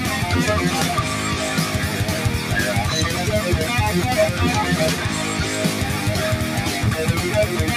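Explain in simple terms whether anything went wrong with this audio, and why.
A noise suppressor meant for speech, applied to music or sounds, runs through the whole clip, turning held sounds and their tails down while sharp starts pass through, so the sound pumps, flutters or thins out.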